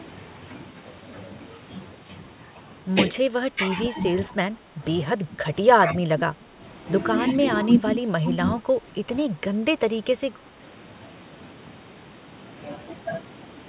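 Speech suppressed in double talk appears five times, at 3.52–3.98 s, 4.29–4.81 s, 5.16–6.61 s, 7.34–7.84 s and 8.21–10.6 s. The speech dips by roughly 5 to 10 dB in patches, most likely where an echo canceller mistook overlapping far-end sound for echo and turned down both. The two longest stretches lose about a second or more in total. Through the band-limited call path, with nothing above 4 kHz, consistent with G.711 A-law at 64 kbps, the dips sound like the talker briefly receding.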